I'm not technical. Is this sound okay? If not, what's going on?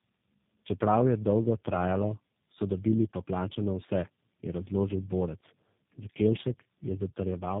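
No. Throughout, the speech suffers from tandem speech coding: it passed through three different phone-network speech compressors in a row, each re-squeezing the last one's damage. Unlike one poor connection, it sounds rough, muffled and warbly at once, with nothing above 3.7 kHz.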